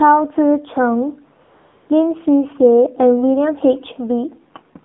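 From start to end the speech carries the sound of the AMR narrowband mobile codec: nothing passes above about 3.6 kHz or below 200 Hz, and the voicing has a buzzy, synthetic edge, which fits a low mode near 7.4 kbps. Unlike simple band-limiting, the damage is in the voice itself, rebuilt from a vocal-tract model rather than just filtered.

At 1.44 s the speech frames stop and AMR comfort noise fills the gap until 1.90 s, a 460 ms stretch. The phone treated the talker as silent, and the receiver substituted smooth, steady synthetic hiss for the real background. Unlike a dropout, the gap is not silent, and it switches in and out abruptly.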